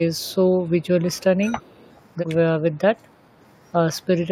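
From 1.02 to 1.67 s, speech suppressed in double talk occurs, likely because the echo canceller mistook the overlap of both talkers for loudspeaker echo and attenuated everything. The speech dips by as much as about 10 dB, sounding pulled back.

An echo leak follows from 1.66 to 1.93 s, likely where the far end's echo canceller let part of its loudspeaker pickup return down the line. A very faint copy of the speech trails about 337 ms behind, sitting far below the direct sound.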